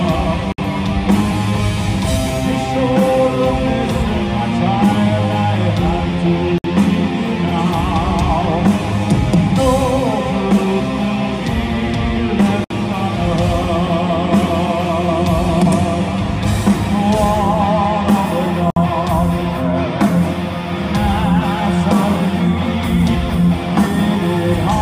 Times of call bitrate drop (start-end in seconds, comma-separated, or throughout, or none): none